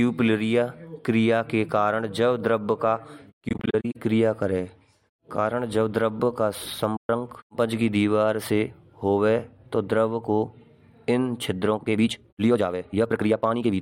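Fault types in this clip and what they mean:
AAC frame loss with muting: The decoder zeroes the spectrum of lost frames, and the overlapping windows fade the sound out and back in, leaving soft-edged gaps. From 3.49 to 3.96 s, after "द्रब का" and before "क्रिया करें", about 235 ms drops out in short holes scattered over 470 ms, the longest around 40 ms. At 6.96 to 7.09 s, after "कारण जब द्रब का" and before "पज की दीवार से", a single 128 ms hole appears.
Time-stretched section: From 11.68 s to the end, the speech suddenly runs 1.77 times faster while its pitch stays the same, so it sounds rushed. This is likely software shortening the passage to fit a length, keeping pitch by dropping short pieces of the waveform. The abrupt change in pace with no pitch rise distinguishes it from a simple playback speed-up.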